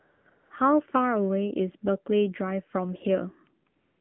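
The whole clip is speech through the AMR narrowband mobile codec, and you can really hear it. Everything sits in a phone band of roughly 150 Hz to 3.4 kHz, with nothing up top. The codec rebuilds the voice from a vocal-tract model excited by a handful of pulses per subframe. At this budget that leaves a buzzy, synthetic edge, which points to one of the lower modes, around 7.4 kbps.

AMR comfort noise shows up in four stretches: 0.00 to 0.26 s, a brief 20 ms blip from 0.30 to 0.32 s, 0.34 to 0.50 s, and 3.70 s through to the end. In each one the phone decided nobody was talking and stopped sending speech frames, so the receiver filled the gap with generated noise built from a rough level and spectrum sketch. You hear a smooth, even hiss that switches in and out instead of the real room.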